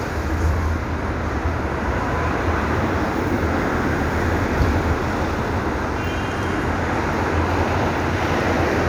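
No technical faults can be heard anywhere in this recording.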